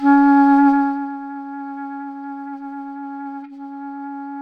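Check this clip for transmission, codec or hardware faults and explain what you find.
No transmission, codec or hardware faults can be heard in this clip. Where the level rises or falls, it moves gradually, the way a fader does, which is an ordinary level change.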